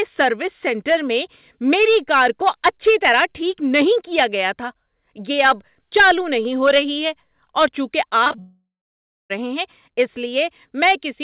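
At 8.24 s, just after "رہی ہے اور چونکہ", repeated packet loss (robotic sound) sets in and runs to 8.40 s. Four short gaps, the longest 22 ms, are patched by repeating the last sound, so half this stretch is concealment and the speech turns choppy. On a spectrogram it shows as smeared, repeated harmonic slices.

From 8.40 s to 9.32 s comes a long network dropout, likely from audio that never arrived. The last sound is stretched into a fading buzz, then about 0.63 s of silence follows before speech resumes at "ہیں اس". The waveform shows a decaying tail and then a flat line, and the spectrogram shows a blank band, with nothing above the 4 kHz ceiling of the G.711 call audio.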